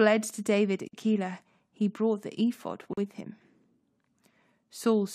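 Gaps at a join of encoded pieces open at 0.88 to 0.93 s (about 48 ms) and 2.93 to 2.97 s (about 41 ms): separately encoded segments were spliced untrimmed, leaving encoder start delay and final-frame padding as brief silences with smeared edges before the speech resumes.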